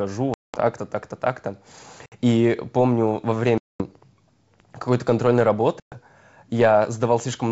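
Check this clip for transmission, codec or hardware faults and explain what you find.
One fault recurs: packet loss on an ADPCM call, over G.722 wideband coding at 64 kbit/s. Holes of 200 ms at 0.34 to 0.58 s, 60 ms at 2.06 to 2.12 s, 220 ms at 3.58 to 3.83 s, and 120 ms at 5.80 to 5.95 s are filled with silence. The decoder's predictor and step size fall out of step with the sender's, so the speech returns distorted and then settles. That distorted recovery after each hard-edged gap sets it apart from a simple dropout.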